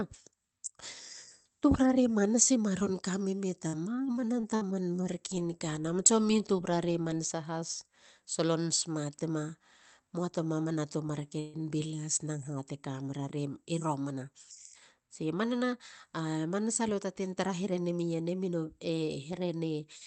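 Right after "manasa maron kamene", from 3.67 to 4.64 s, the speech turns choppy and robotic, with small pieces dropping out. This is repeated packet loss: four separate holes, the longest about 57 ms, were patched by stretching the preceding sound, adding 156 ms of filler while 120 ms of real audio went missing.

Straight after, from 4.84 to 5.40 s, the speech drags while its pitch stays put, running at 91% speed. That is a jitter buffer slow-down: the receiver repeated small stretches of waveform to rebuild its reserve, adding 56 ms.

At 11.40 to 11.56 s the sound briefly hangs on a smeared, held tone for 138 ms, then resumes exactly where it stopped with nothing lost. This is likely a call audio freeze, where late packets emptied the buffer and the receiver filled the wait by extending the last sound.

From 15.53 to 18.03 s the speech runs a little faster at the same pitch, running at 102% speed. 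This is a jitter buffer speed-up: with surplus audio queued, the receiver trimmed tiny pitch-length slices, removing about 50 ms in total, all through the Opus call path whose upper band stops near 8 kHz.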